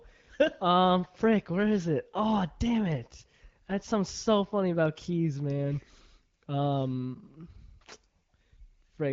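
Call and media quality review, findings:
No faults found in this speech clip. The AMR wideband (HD Voice) path is audible as band-limited speech topping out near 7 kHz, coded at a rate that points to 12.65 kbit/s.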